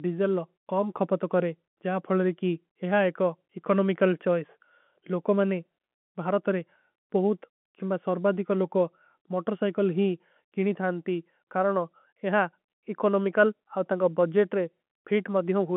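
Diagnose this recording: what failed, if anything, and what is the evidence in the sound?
Nothing failed; no faults heard.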